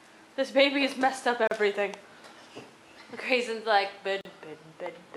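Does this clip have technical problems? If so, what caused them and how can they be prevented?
Yes. Two gaps at a join of encoded pieces cut into otherwise continuous sound: about 37 ms from 1.47 to 1.51 s, and 40 ms from 4.21 to 4.25 s. Each separately encoded piece kept its encoder start-up delay and last-frame padding, so silence sits where pieces meet. Unlike a dropout, nothing is lost: the sound resumes exactly where it stopped, with smeared edges. Trimming encoder delay and padding before joining, or encoding gaplessly, prevents it.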